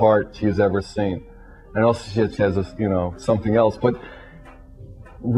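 No technical fault can be heard anywhere in the audio. There is nothing to pin to a time or trace to a cause.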